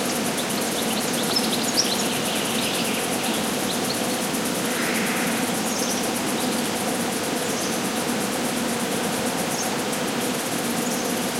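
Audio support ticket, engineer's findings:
Loud pop at 8.21–8.24 s (single) and 9.05–9.22 s (two in quick succession). Likely a voltage step or spike from a connector, switch or static discharge, shaped by later stages into sharp pops roughly 10 dB above the signal, with the sound continuing underneath.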